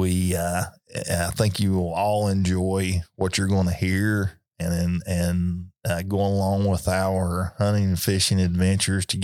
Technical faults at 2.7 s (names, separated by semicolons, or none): none